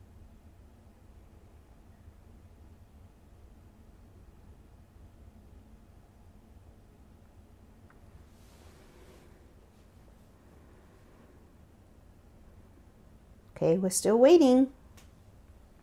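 No technical faults can be heard anywhere in the recording. Nothing in it points to a problem in how the sound was captured, carried or played back.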